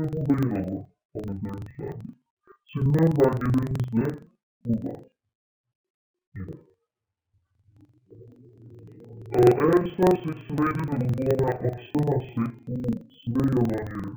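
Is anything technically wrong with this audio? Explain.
Yes. Throughout, interleaved audio is being read as planar: each 2048-sample block, about 42.67 ms, has its alternating left-right samples split into halves. That stretches each half to half speed, so the sound plays an octave low, doubled and choppy, stuttering at 23.4 Hz.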